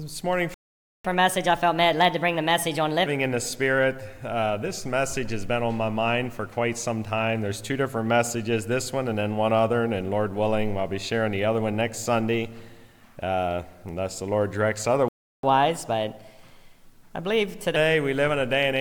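At 0.54 s the sound halts mid-flow and stays silent until 1.05 s, a half-second playback stall, likely from the player running out of data. Unlike a dropout, the output simply goes silent until the player recovers. A second stall, 0.35 s long, silences it from 15.08 s to 15.43 s.

Each stall is followed by catch-up at higher speed as the player works through its backlog. From 1.05 s to 3.06 s it runs at 1.25 times normal speed, roughly four semitones sharp. From 15.43 s to 17.76 s it runs at 1.15 times, about two semitones high. Unlike a pure pitch shift, tempo rises with pitch, and both settle back to normal once the lost time is regained.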